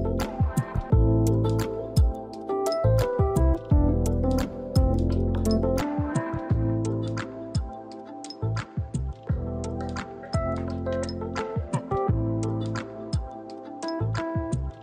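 The recording input was likely switched to a poorer device at 5.81 s, with no gap at the changeover. From there to the end the audio loses everything above 9 kHz, turning duller, drops roughly 5 dB in level, and carries a new background noise around 40 dB down.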